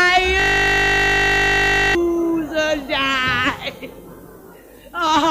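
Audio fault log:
0.40–1.95 s, system hang loop: the system froze while the sound hardware kept replaying the same 20 ms stretch of its ring buffer, 78 times over. The exact repetition at 50 Hz fuses into a steady buzz in place of the sound.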